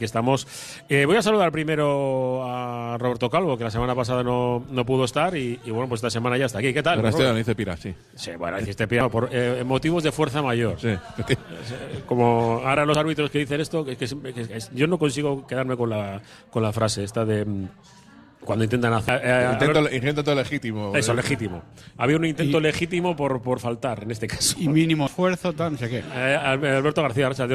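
Four tiny blips at 9.01, 12.94, 19.09 and 25.07 s point to damaged data in a compressed stream. Each one is a few milliseconds long, where the decoder hits corrupted bytes, misreads the frame, loses sync and has to hunt for the next valid header.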